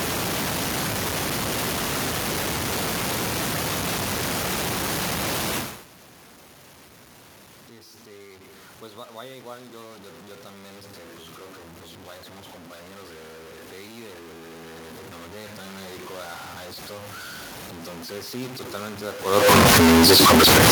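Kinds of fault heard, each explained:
Low bit depth without dither: The speech is coarse and grainy throughout, with a gritty distortion that follows the voice, and the quietest moments sputter or fall to silence. The likely cause is truncation to very few bits without dither, fitting roughly a 4-bit signal, so the error is about as loud as the speech. On a waveform, the trace shows visible stair steps. A spectrogram shows smeared broadband grit tracking each syllable rather than a steady noise floor.
Automatic gain rising: The level control raises its gain slowly, so speech and room noise swell together. From 8.04 to 11.02 s, after the input drops by about 23 dB, the gain climbs about 5 dB, leading into "pues creo que pues". From 13.9 to 16.12 s, after "somos compañeros de de", it climbs about 4 dB before "a a esto". A waveform shows the envelope and noise floor ramping up together. A spectrogram brightens gradually across all frequencies.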